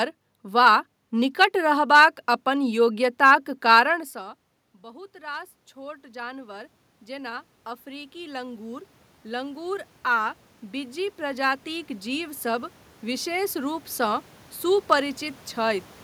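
Right after "निकट रहबाक अपन योग्यताक", from 3.89 to 9.92 s, the level drops as the talker moves back, and automatic gain rising slowly pulls it up about 14 dB, voice and room noise together. It climbs again about 6 dB from 10.61 to 13.93 s.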